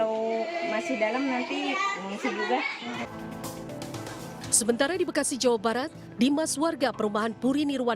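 No technical faults can be heard anywhere in the audio.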